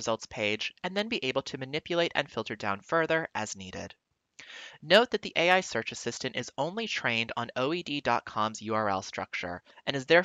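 Sharp clicks at 0.99 s and 7.62 s show as thin vertical spectrogram lines and waveform jumps, likely dropped samples, a handful lost each time.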